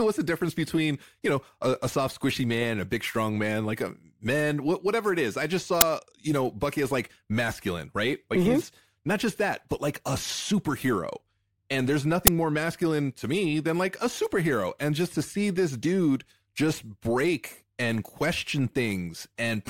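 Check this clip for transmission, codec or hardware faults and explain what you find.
Two harsh clicks break into the speech, both from an uninitialised buffer. The first lands at 5.81 s, between "it is i just" and "you know bucky as", and the second at 12.27 s, between "and there's" and "more masculine to me". Each is a sudden, loud 10 ms crack of digital noise. A block of playback memory was sent out before any audio had been written to it, so leftover data was played as sound.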